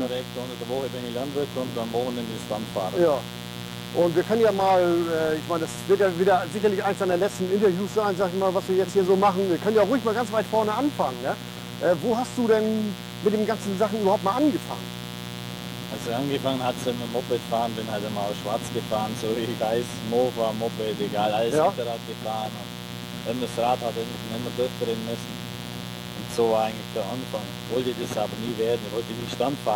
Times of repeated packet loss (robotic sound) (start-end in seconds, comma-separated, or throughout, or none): none